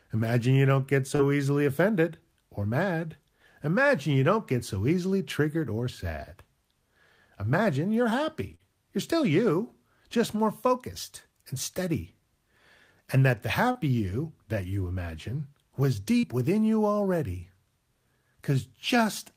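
Short concealed packet loss occurs at 1.15 s, between "you don't get" and "easily offended or mad", then at 8.55 s, at 13.71 s after "that the", and at 16.19 s after "that you imagine was". Each time about 40 ms of the speech arrived too late to decode, so the receiver extended the preceding sound to bridge the gap before rejoining the real signal. Each gap is heard as a brief smear or wobble.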